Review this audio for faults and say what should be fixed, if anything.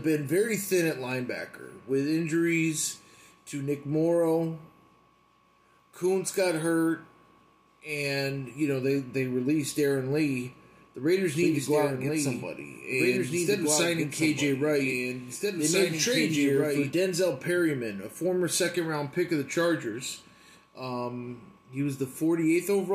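A doubled audio track runs from 11.43 to 16.93 s: a second full-band copy about 5 dB quieter trails the sound by roughly two seconds, with no decay or room colour, and switches on and off abruptly. Its likely cause is a slower second capture path. To prevent it, route each source through only one capture path and check edits for overlapping duplicate regions.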